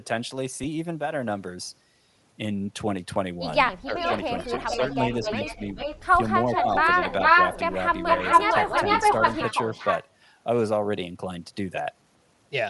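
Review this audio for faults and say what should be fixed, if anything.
The whole clip carries a grainy, breathy edge in the upper range. The codec damage is plainly audible. This is likely Bluetooth LC3 compression. LC3 codes sound in short transform frames, and this clip fits 7.5 ms frames. At a bitrate that sounds like about 48 kbps, much of the upper spectrum is zeroed. The gaps are filled with noise, which gives the speech its rough texture. To prevent it, raise the LC3 bitrate or pick a higher-quality LE Audio configuration.

There are short smeared blips at 0.63 s, 3.68 s and 11.76 s. Each lasts about 7.5 ms. These are lost LE Audio frames. When a frame goes missing, the LC3 decoder conceals it by reusing the previous spectrum with random signs. Each loss here is a single frame, so the concealment is brief. It shows as a momentary noisy smear rather than a dropout. To prevent it, improve the radio link by reducing distance, interference and competing traffic.

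The speech dips twice. The first dip runs from 3.85 to 4.09 s and covers around 150 ms. The second runs from 4.65 to 5.6 s and covers about half a second. The deepest drops are roughly 10 dB. This fits speech suppressed in double talk. The likely cause is an echo canceller facing both sides at once. It could not tell the talker from loudspeaker echo, so it turned everything down. To prevent it, tune the canceller's double-talk detection so it ducks less aggressively.

A delayed copy of the speech appears in four stretches. From 3.99 to 4.95 s it comes about 432 ms late, around 10 dB under the speech. From 5.12 to 6.0 s it comes 437 ms late, about 5 dB under. From 6.54 to 7.73 s it comes 443 ms late. From 8.05 to 10.06 s it comes 452 ms late. In these last two stretches it is about 5 dB louder than the speech. This is echo leak. The likely cause is a far-end loudspeaker whose echo canceller passed its microphone pickup back. 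The delay creeps upward. To prevent it, use a headset at the far end or fix that canceller's adaptation.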